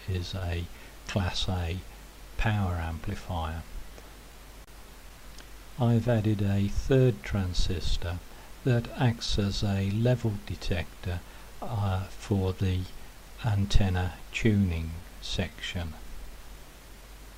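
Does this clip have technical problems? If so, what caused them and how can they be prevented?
Yes. There is clock drift between sender and receiver: the sending device's audio clock runs about 2% slow relative to the receiver's. Because fewer samples arrive than the receiver plays out, its jitter buffer keeps sinking toward empty. The mismatch lasts the whole clip, so small timing irregularities surface throughout rather than at one point. Locking both ends to a common clock, or running adaptive resampling that tracks the rate difference, prevents this.

The audible result is repeated timing corrections from 0.77 s to 17.34 s. To keep the buffer from running dry, the receiver repeatedly stretches the audio by repeating short slivers, which plays it at about 98% speed and adds roughly 300 ms in total. The edits all lengthen the sound but fall at uneven intervals. Smooth continuous resampling instead of discrete repeat-edits avoids this.

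Scattered short gaps occur between 5.09 s and 6.10 s, where a few packets, around three, were lost or arrived late. The receiver concealed each hole by extending the preceding sound, filling only about 15 ms altogether, with the longest gap a few milliseconds. These patches come through as brief ticks or tiny smears inside that one-second window. A slightly deeper jitter buffer and forward error correction on the stream would help prevent them.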